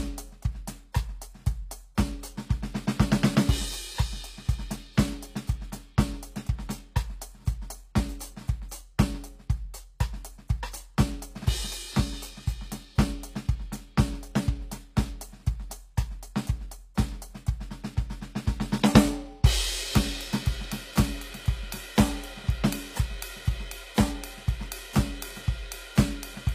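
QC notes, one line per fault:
Throughout, HE-AAC compression: the treble sounds gritty and metallic, the damage is plainly audible, and nothing reaches above 15.5 kHz. This is likely from treble rebuilt by copying lower bands upward, which fits a bitrate around 24 kbps.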